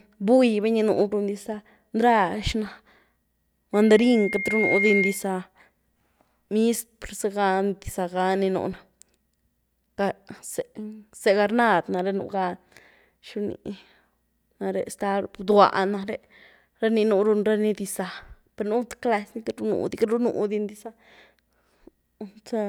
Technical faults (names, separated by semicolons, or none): loudspeaker feedback squeal